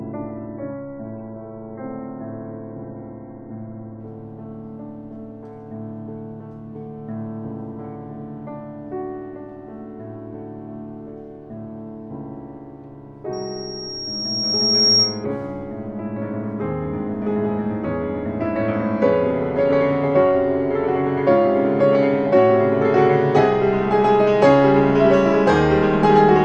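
From 0 to 4.0 s the adaptive stream is starting at a low bitrate: nothing reaches above 2.7 kHz, which fits a very low-rate AAC version of roughly 16 kbit/s. At 4.0 s the treble returns abruptly with no gap, unlike a dropout, as the player steps up to a higher version.

From 13.33 to 15.25 s a loudspeaker feedback squeal appears: a single 5.6 kHz tone swells over about a second and a half to around 5 dB above the audio. Its steady self-building growth, rather than a fixed interfering whine, marks it as feedback through a microphone–speaker loop.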